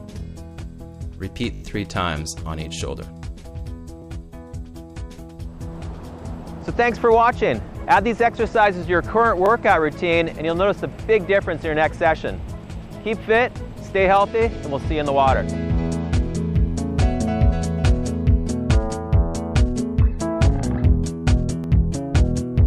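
Repeated buffer faults stutter the audio at 1.54–1.62 s, 4.02–4.04 s, 9.46–9.48 s and 21.64–21.66 s. Late audio made the device replay a short piece, which fits a 20 ms buffer. The first spot loops four extra times.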